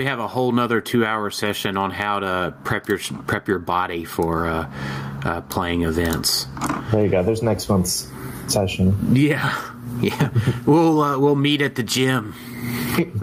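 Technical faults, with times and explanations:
Throughout, gain pumping: the gain is pulled down under each loud sound and recovers between them, a gain swing of roughly 25 dB, so loud and soft passages sit squashed close together in level. The likely cause is input gain set far too high, with a fast limiter or compressor clamping down on each peak and releasing between them. On a waveform the envelope looks flattened, with the noise floor rising between peaks; a spectrogram shows broadband noise brightening in the gaps and darkening under each event.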